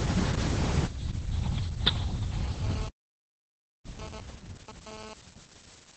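From the start, Opus voice compression in SILK mode muffles and roughens the speech, consistent with about 10 kbps; a spectrogram shows nothing above 8.6 kHz. At 2.62 s a GSM phone buzz enters, a raspy 217 Hz drone about 16 dB below the speech, pulsing irregularly like a data transfer, drawn as stacked harmonic lines until 5.14 s. From 2.88 s to 3.85 s a playback stall silences everything for 0.95 s, a flat gap in the waveform, likely from the player running out of data.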